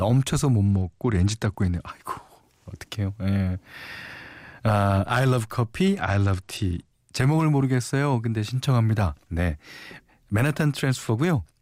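From 0.65 to 1.89 s and again from 6.01 to 6.92 s, a Bluetooth SBC bit pool drop dulls the treble and adds gritty noise, consistent with a link falling to about 90 kbps. A spectrogram shows the upper bands thinning or vanishing, with speckled noise below.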